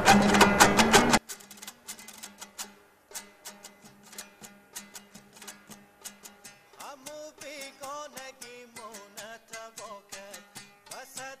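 From 1.18 s to the end, the sound collapses to a faint remnant about 29 dB quieter, with centred content and bass nearly gone. This is likely one channel inverted: reversed polarity cancels everything common to both channels when summed to mono.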